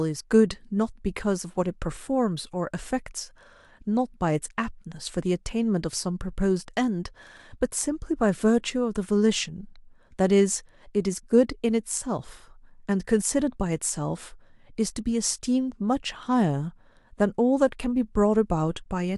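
No technical faults are audible.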